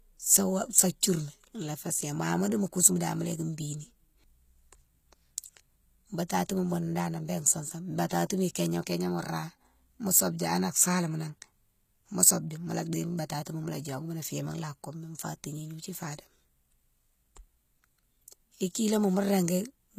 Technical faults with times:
0.00-19.98 HE-AAC compression

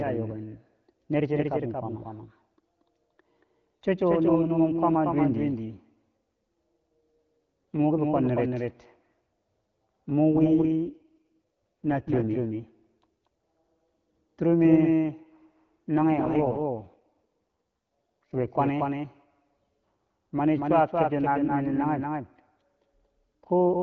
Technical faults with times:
0.00-23.82 doubled audio track
10.34-12.30 AMR rate drop
15.96-18.48 AMR rate drop

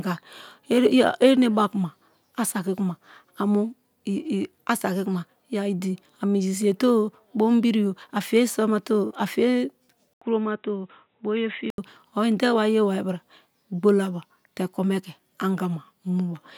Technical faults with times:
10.13-11.78 input switched to a poorer device

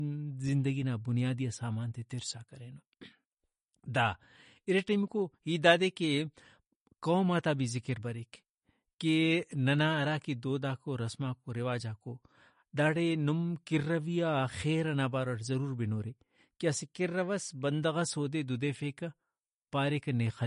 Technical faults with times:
0.00-20.46 MP3 compression

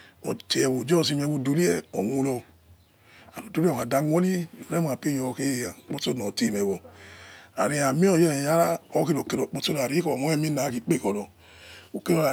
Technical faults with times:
none

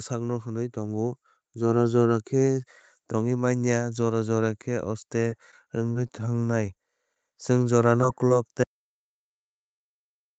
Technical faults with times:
0.73-2.17 automatic gain rising
5.28-7.16 scattered short gaps
8.01 short concealed packet loss
8.28-8.31 short concealed packet loss
8.63-10.38 audio dropout to silence

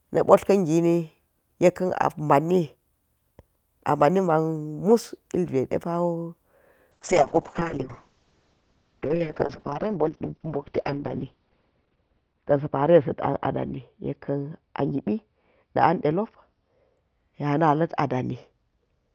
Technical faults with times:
6.93-19.14 call bitrate drop

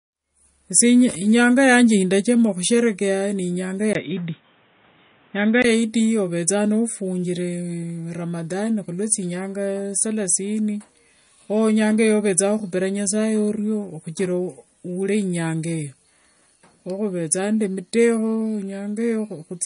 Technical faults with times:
0.00-19.66 MP3 compression
3.93-5.64 input switched to a poorer device

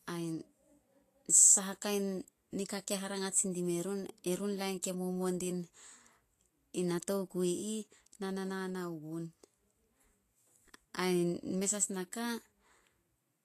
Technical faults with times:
0.00-13.44 Vorbis compression

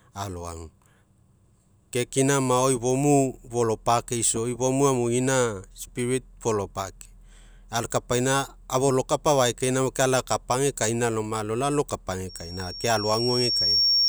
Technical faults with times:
12.29-14.09 loudspeaker feedback squeal

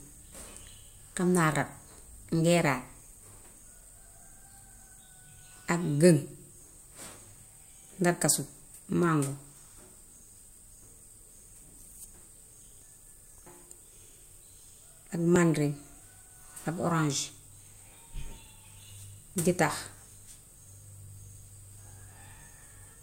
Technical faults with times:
11.37 audio missing between chunks
15.36 audio missing between chunks
19.35 audio missing between chunks

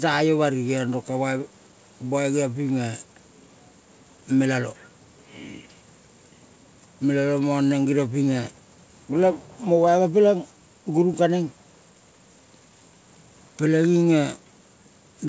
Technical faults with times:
none

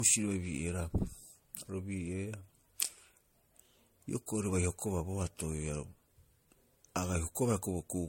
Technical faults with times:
0.00-8.08 generation loss

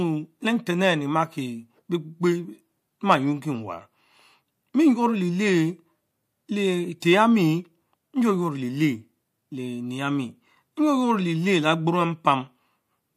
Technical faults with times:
7.00-7.02 pre-echo

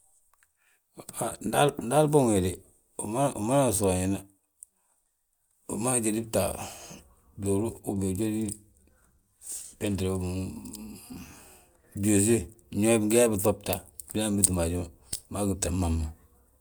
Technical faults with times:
none

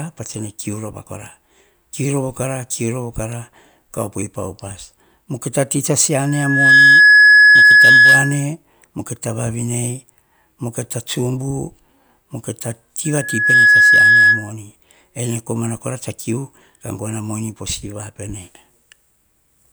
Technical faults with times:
6.26-8.46 loudspeaker feedback squeal
13.05-14.51 loudspeaker feedback squeal

